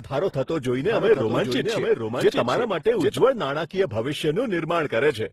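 From the first moment to the end, the speech carries the marks of transcoding between lossy codecs. Nothing survives above 15.7 kHz. The sound has two layers of coding damage: the metallic swirl and smeared high band typical of a low-rate HE-AAC pass, and on top of it Opus's own grainy quantisation. This points to a chain of roughly 16 kbit/s HE-AAC followed by 24 kbit/s Opus, the likely cause. On a spectrogram the top edge is a hard horizontal cut at 15.7 kHz, with blotchy, patchy texture beneath it.

From 0.80 s to 3.18 s a doubled audio track appears. A second full-band copy of the same speech trails the original by about 0.7 s and is about 5 dB quieter. This is most likely a duplicate capture through a slower path being mixed back in. It sounds like an overlapping echo with no room tail or decay, and it switches on and off abruptly at both ends. The waveform shows a denser envelope over that span. 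A spectrogram shows each syllable's pattern repeated, slightly fainter, 0.7 s later.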